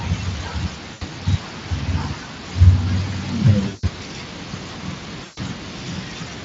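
VoIP packet loss concealed by the speech codec occurs at 0.93 to 1.03 s, 3.67 to 3.84 s and 5.23 to 5.40 s, gaps of about 80, 160 and 140 ms. With packets missing, the Speex decoder keeps repeating its last pitch and spectral shape at falling gain. The speech stretches into a fading buzzy tone or coloured noise, and stays weak and smeared briefly after packets resume.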